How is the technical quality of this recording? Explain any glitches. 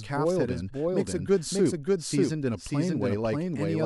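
The recording has one clear fault running through the whole clip: a doubled audio track. Every sound is heard twice, with a full-band copy trailing the original by about half a second at roughly the same level. The copy carries no decay or room colouring, which points to a likely cause of the signal being captured a second time along a slower path, or of two copies left misaligned in an edit. On a waveform, each burst of energy has an almost identical twin about half a second later. A spectrogram shows the same harmonic pattern stamped twice, evenly offset along the time axis.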